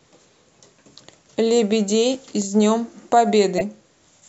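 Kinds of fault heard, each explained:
Corrupt frame decoded: a short, loud glitch peaking around -5 dBFS, at 3.58 to 3.62 s in this speech. It lasts about 40 ms, likely a few compressed frames with flipped bits that the decoder played anyway, putting energy at the wrong frequencies.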